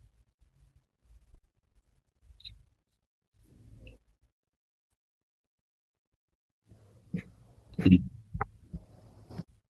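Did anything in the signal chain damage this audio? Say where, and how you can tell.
Yes, at the network stage. From 1.31 to 1.49 s the speech goes choppy and robotic. Repeated packet loss leaves five short holes, the longest about 19 ms, and the receiver papers over each one by extending the last sound, so about 42% of that stretch is concealment.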